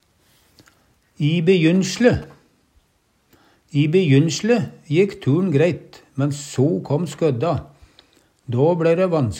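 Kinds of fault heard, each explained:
GSM signalling bursts: a nearby 2G phone's radio pulses get rectified, giving a galloping ticking buzz at about 217 Hz, fairly quiet, from 1.52 to 2.24 s.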